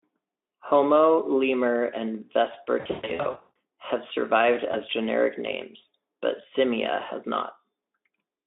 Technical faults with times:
2.79-3.55 VoIP packet loss concealed by the speech codec
4.71-4.76 VoIP packet loss concealed by the speech codec

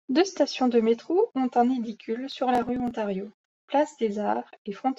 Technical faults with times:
2.32-2.91 processor overload crackle

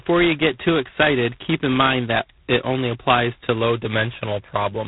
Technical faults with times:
0.00-4.87 G.726 ADPCM

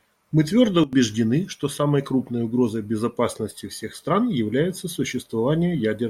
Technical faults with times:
0.84-0.93 sudden gain jump

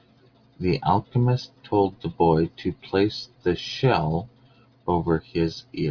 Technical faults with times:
none

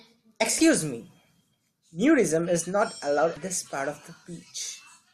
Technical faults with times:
0.58-0.61 damaged data in a compressed stream
3.34-3.37 damaged data in a compressed stream

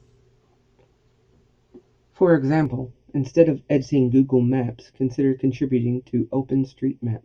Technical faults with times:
2.66-7.25 channel delay (comb filtering)

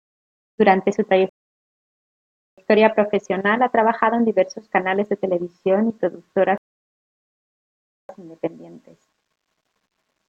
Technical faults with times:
1.29-2.58 rebuffering stall
6.58-8.09 rebuffering stall

